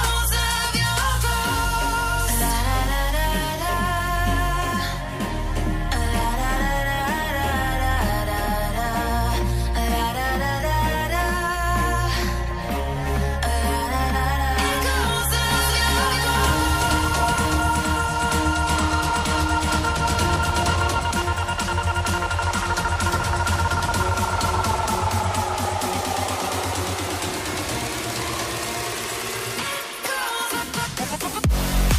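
From 15.51 to 20.91 s a doubled audio track appears: an equally loud copy trails by about 400 ms, likely from a second capture path, showing as repeated waveform and spectrogram shapes.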